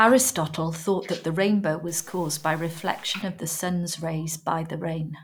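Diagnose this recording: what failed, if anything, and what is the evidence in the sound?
A stuck bit, likely a converter or data line holding one bit fixed, corrupts the speech from 1.88 to 3.22 s, after "thought that the rainbow" and before "of the sun’s". Samples jump by a step of about -45 dBFS, giving grainy noise over the speech and noise in quiet gaps.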